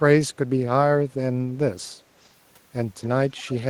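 An echo leak appears twice near the end. A faint copy of the speech returns 215 ms late, from 3.03 to 3.08 s and again from 3.36 to 3.55 s. It sits roughly 20 to 25 dB down. A far-end echo canceller likely let loudspeaker pickup through.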